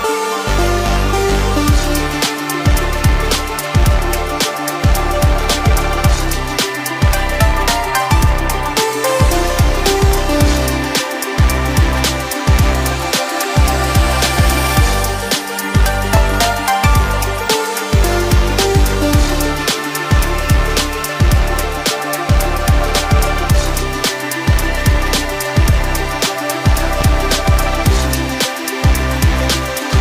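At 16.17 to 16.20 s and again at 27.01 to 27.04 s, a single loud pop cuts in, each peaking about 10 dB above the surrounding sound. Each is a brief voltage pulse, most likely from a plug, switch, static discharge or driver glitch, shaped by the circuitry into a short thump. Unlike a dropout or digital glitch, nothing is lost: the sound carries on underneath, with the pop simply laid on top.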